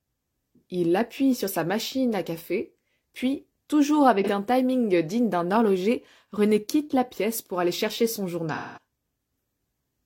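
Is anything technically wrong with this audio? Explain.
Yes. AAC frame loss with concealment at 4.24 s (43 ms, consistent with a single lost frame) and 8.54 to 8.79 s (0.24 s, suggesting several consecutive frames): the decoder patched the gaps from the last good spectrum, giving a brief smeared, phasey blur, then a longer decay toward silence before recovering.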